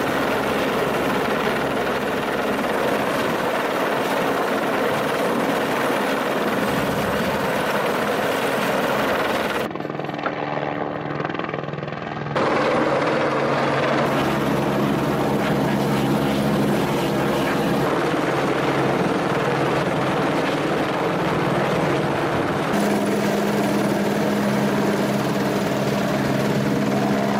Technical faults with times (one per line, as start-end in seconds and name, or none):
none